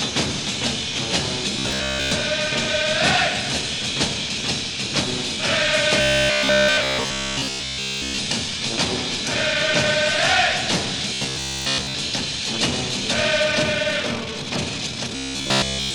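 Robotic sound from repeated short buffers occurs at 1.59–2.11 s, 6.01–8.20 s, 11.14–11.95 s and 15.16–15.94 s. It is a rigid 66.7 Hz buzz, likely caused by replaying the last 15 ms in place of skipped audio. Most of the first and third stretches is repeated, and all of the second and fourth. Unlike steady hum, it appears only in these stretches and loosely follows the underlying sound.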